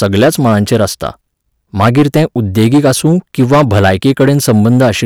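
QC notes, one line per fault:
throughout, hard clipping: every louder syllable carries a harsh, buzzy fuzz rather than occasional crackle, so the speech sounds gritty and strained on its stressed moments. The level runs about 11 dB hotter than the stage can pass, and the waveform is sliced flat at the ceiling on roughly 7 percent of samples. Those squared-off peaks generate a spray of high harmonics, which is what gives the loud passages their rasp.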